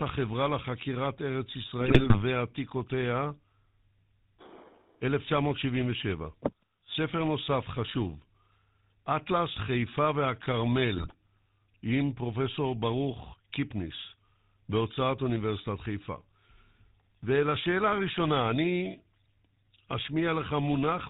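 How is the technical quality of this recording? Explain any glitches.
The quality is rough throughout, with two short bursts of corruption on top.

The whole thing carries GSM full-rate codec damage: a buzzy, gravelly edge and nothing above 4 kHz, which fits the old 13 kbps GSM coder and its pulse-driven vocal-tract model.

GSM bit errors hit from 1.81 to 2.21 s and again from 10.96 to 11.14 s. Corrupted filter, pitch and gain values turn the speech into squawks and gargling pops, with a higher bit error rate in the second burst (about 6.1% against 2.1%).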